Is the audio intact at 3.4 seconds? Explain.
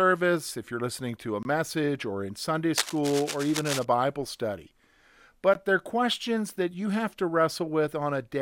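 No, 3.4 seconds falls inside a stretch of cable scratch noise running from about 2.78 to 3.85 s. You hear a dense, ragged scratching and rustling laid over the speech, and it's fairly loud, only about 5 dB under the speech itself. The likely cause is a worn cable, connector or control being moved, so its contact resistance jumps around rapidly and spits uneven bursts of noise into the signal.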